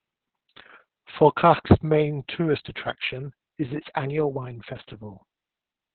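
This is speech, and it carries heavy Opus voice compression from start to finish. The sound is boxed into a narrow band with nothing above about 4 kHz, so it comes out muffled and phone-like. The voice also sounds hoarse and a little robotic, because the linear-prediction coder is rebuilding its buzz from very coarse data. That damage fits the SILK mode running at a very low bitrate, near 6 kbps, with long frames of around 60 ms.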